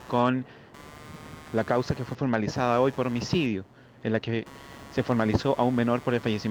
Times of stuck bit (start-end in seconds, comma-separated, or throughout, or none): none